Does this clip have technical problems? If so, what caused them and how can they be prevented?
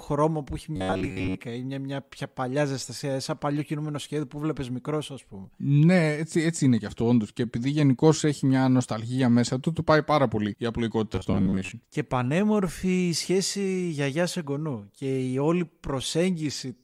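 Yes. Robotic sound from repeated short buffers occurs at 0.76–1.41 s, after "που έχει", and at 11.13–11.72 s, after "πάει πάρα πολύ η". It is a metallic 93.8 Hz buzz, likely from an 11 ms chunk looping while audio arrived late. It shows as evenly spaced spectrogram harmonics and roughly repeating waveform cycles. A larger jitter buffer prevents it.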